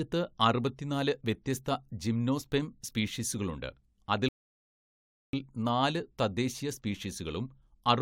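Speech runs normally until a rebuffering stall at 4.29 s, when the playback stops dead into silence until 5.33 s, adding about 1.05 s to the clip. The player had used up its downloaded audio and waited for more to arrive. Unlike a dropout, where a stretch of sound goes missing and the speech jumps ahead, here the sound resumes exactly where it paused, so nothing is skipped, only time is inserted.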